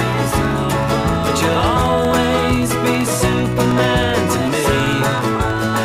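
A background task blocking the USB bus or audio driver every 64 ms causes periodic USB or driver dropouts in this audio, from 0.06 s to 5.76 s. About a millisecond is lost each time and replaced by silence, roughly a hundred gaps, heard as evenly spaced ticks wherever there is signal.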